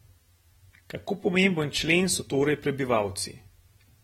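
From the first moment to the last, the speech has a plainly audible coded quality: nothing comes through above 16.6 kHz, sibilants turn fizzy, and sustained sounds pick up a warble and smear. That's likely AAC compression, and the damage level fits a bitrate around 40 kbps. The encoder seems to be starving the upper bands of bits, cutting the top off and leaving thin, patchy detail in the highs, so everything sounds a bit dull.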